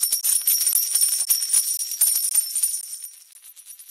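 Gaps between chunks open at 0.21–0.23, 0.73–0.75, 1.25–1.27, 1.77–1.79, 2.29–2.31, 2.81–2.83 and 3.33–3.35 s. Each is 20 ms of silence inserted after a 0.5 s block, so the sound stops abruptly with hard edges every 0.52 s. Nothing is lost, only interrupted.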